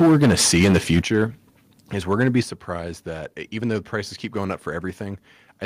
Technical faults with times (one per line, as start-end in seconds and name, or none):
0.00-1.24 microphone overload
0.02 microphone volume stepped down
1.02 microphone volume stepped down
2.43 microphone volume stepped down